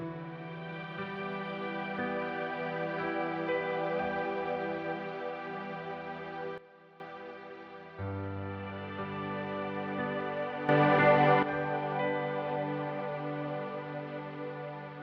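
At 6.58 s the level drops about 14 dB in one step and comes back at 7.0 s. At 10.69 s it jumps about 11 dB up until 11.43 s. Background moves with the sound, so it's a sudden gain jump, likely an unramped digital gain change.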